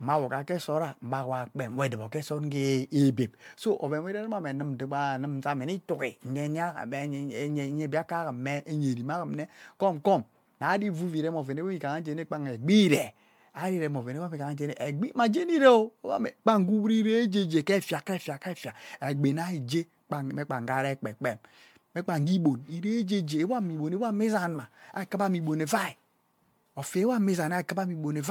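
Speech that carries generation loss from start to finish: the sound is swirly and hollow, and consonant attacks are smeared, more than one pass at a 128 kbit/s MP3 setting would leave. The likely cause is repeated lossy re-encoding, around fifteen passes, each quantising on a shifted frame grid so the damage accumulates. On a spectrogram, content stops at about 19.9 kHz and the band below is riddled with flickering holes; onsets look blurred rather than sharp in the waveform.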